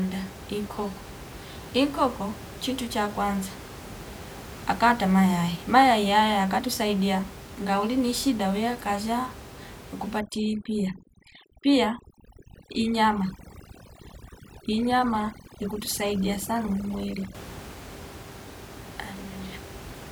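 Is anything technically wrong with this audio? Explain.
Yes. From 10.19 to 17.35 s there is overdone noise removal. An over-aggressive noise reducer cuts bands near the room noise, so the background twinkles.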